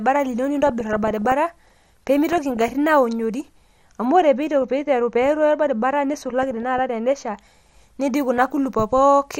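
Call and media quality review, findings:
MP2 compression throughout the speech, likely a low-rate MPEG Layer II encode, consistent with around 80 kbps. Starved sub-bands drop out and flicker, and the remaining bands are coarsely quantised. The result is dull, with a plainly audible gurgling, granular edge.

DAB burbling at 0.63–1.35 s, 2.29–2.74 s, 4.62–4.70 s, 6.42–6.80 s and 8.38–8.52 s. Residual bit errors, a fraction of a percent, slip past error correction into the MP2 frames. Corrupted samples put short blips of noise in single sub-bands and corrupted scale factors make sub-bands jump in level, causing burbling over the speech.

De-emphasis applied wrongly, 4.05–7.40 s. A treble-cut stage is active on audio carrying no pre-emphasis, or the cut is doubled, giving a smooth downward slope about 11 dB lower at 10 kHz than at 1 kHz. The speech turns muffled and dull for that stretch.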